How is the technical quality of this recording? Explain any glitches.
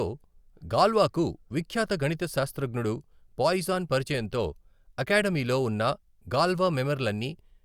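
No glitches can be heard in this speech recording. There is nothing in it that calls for an explanation.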